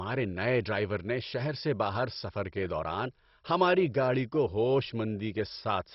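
Throughout, the speech is dull, with nothing above 5.6 kHz and a gurgling, flickering graininess: likely heavy MP2 compression, not a clean low-pass filter.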